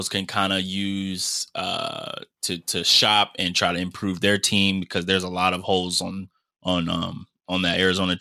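Speech that, from 4.77 s to the end at 8.21 s, shows a Bluetooth SBC bit pool drop. The top sub-bands lose their bits, so the treble dulls and gritty quantisation noise rises. This fits a fall from bit pool 28 to 13, near 102 kbps. On a spectrogram the upper bands thin out abruptly at 4.77 s.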